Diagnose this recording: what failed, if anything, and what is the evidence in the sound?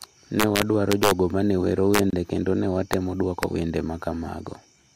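Integer overflow in sample-format conversion: loud speech peaks wrap to the opposite sign, giving violent cracks from 0.40 to 1.11 s, 1.94 to 1.99 s, and at 2.93 and 3.43 s. Each shows as a full-height sign flip on the waveform.

A gap at a join of encoded pieces at 2.10 s: a 26 ms silence breaks the speech, then resumes where it stopped. Unsynchronised encoder delay and padding were kept, leaving a thin blank column on the spectrogram.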